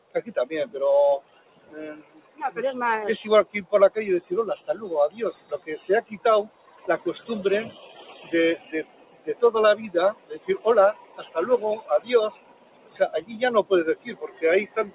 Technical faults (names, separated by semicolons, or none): noise suppressor applied to music or sounds; sound cut by the noise suppressor